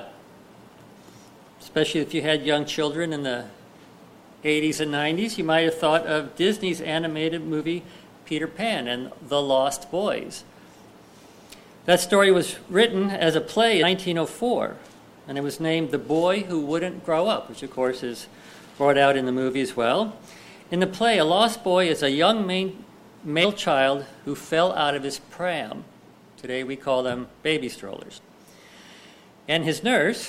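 At 11.38 to 11.40 s, 13.82 s, 23.43 s and 28.17 to 28.19 s, damaged data in the compressed stream makes the decoder misread corrupted frames and lose sync while it searches for the next valid header. Each event is a brief chirp or blip of about 20 ms or less. On a waveform it shows as a short, abrupt discontinuity, and on a spectrogram as a thin vertical smear of broadband energy cutting across the surrounding sound.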